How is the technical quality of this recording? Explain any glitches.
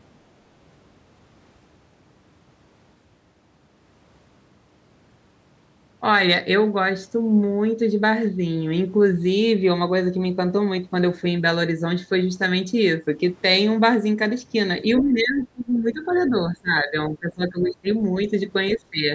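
The recording has two related glitches. Both point to an echo canceller struggling while both ends of the call talked at once. The call's microphone processing band-limits the audio to nothing above 8 kHz.

Speech suppressed in double talk, 14.83 to 17.87 s and 18.77 to 19.1 s: the canceller likely mistook overlapping talk for echo and turned everything down, so the speech dips by around 20 dB.

Other side's voice leaking through, 14.98 to 15.02 s and 16.11 to 16.29 s: loudspeaker echo likely escaped cancellation, leaving brief scraps of a second voice at about 15 dB and about 25 dB below the speech.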